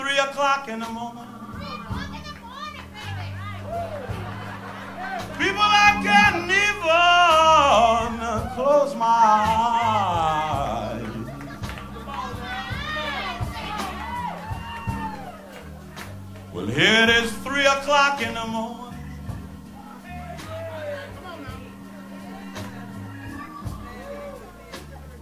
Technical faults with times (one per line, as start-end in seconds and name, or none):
none